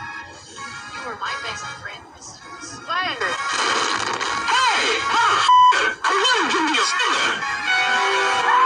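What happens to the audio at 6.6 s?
Nothing goes wrong at 6.6 s; the audio plays through that moment intact, with no dropout, click or other fault.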